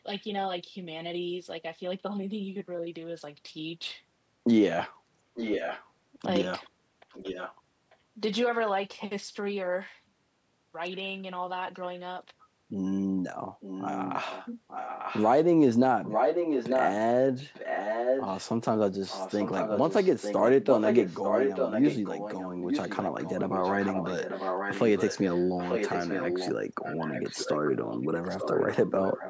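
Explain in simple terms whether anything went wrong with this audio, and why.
Echo leak at 5.3–5.9, 7.1–7.55, 7.9–7.96, 13.6–15.3, 16.0–16.9 and 17.5–18.4 s, then from 19.1 s to the end. The voice repeats about 0.9 seconds later, likely because a loudspeaker's echo canceller let the sound return.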